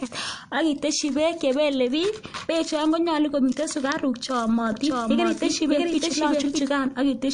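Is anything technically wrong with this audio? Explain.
Yes, there are two faults.

MP3 compression runs through the whole recording. Nothing is present above 9.8 kHz, where the encoder has cut the treble to save bits. The remaining band is split into frequency lines, and weak ones are zeroed unevenly from frame to frame, so those components flicker in and out. The result is a plainly audible watery, swirling texture with metallic chirps on s sounds and smeared consonant attacks. The heavy damage fits a low bitrate, around 50 kbps.

A doubled audio track appears from 4.72 s to 6.62 s. A second full-band copy of the speech runs about 0.7 s behind the original at roughly the same level, so two overlapping streams of speech are heard. The copy has no decay or room colouring, and it starts and stops abruptly at those times rather than fading. The likely cause is an edit or a slower capture path that mixed the same audio in twice, out of step.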